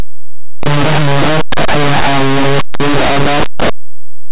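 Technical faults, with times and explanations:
Throughout, linear audio read as companded: very loud, harsh distortion, because plain linear 8-bit samples are being expanded as mu-law codes.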